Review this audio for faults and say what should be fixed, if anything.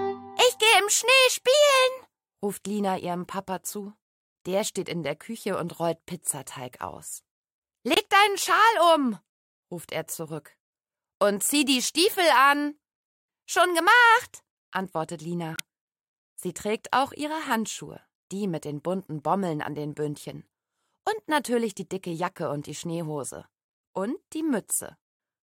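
Three spots drop out with a corrupt frame muted: 7.94 to 7.98 s, 15.54 to 15.60 s, and a very short one at 23.96 s. Each gap cuts in abruptly to dead silence and the sound picks up right on time afterwards, which points to damaged compressed frames the decoder rejected and the player blanked out. The 15.54 s hole is the longest, about 60 ms, and sounds like a few frames went at once.

To prevent it, protect the stream against bit errors on storage or transport and add checksums or retransmission so bad frames get recovered before decoding.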